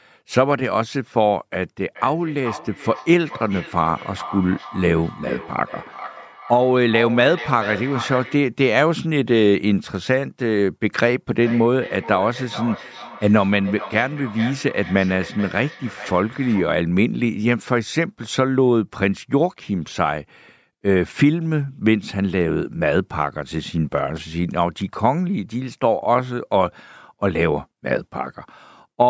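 Speech with feedback echo between two devices from 1.95 to 8.56 s, peaking about 13 dB below the voice, and again from 11.43 to 16.85 s at about 15 dB below. Each repeat returns roughly every 400 ms, thinner and more ringing, unlike the smooth decay of room reverberation.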